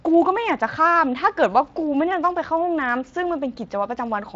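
No faults are audible in this speech; the Speex codec path adds only light coding texture, and the band ends near 7.6 kHz, as wideband Speex would.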